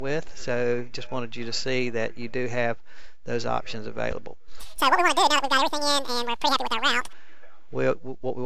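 A wrong sample rate runs from 4.60 to 7.13 s. Across that stretch the audio plays back twice as fast and a full octave, 12 semitones, higher, with speed and pitch shifting together as one. That locked pairing means the samples themselves are intact but are being clocked out at the wrong rate with no conversion. A clean doubling fits material recorded at 16 kHz being played back at 32 kHz.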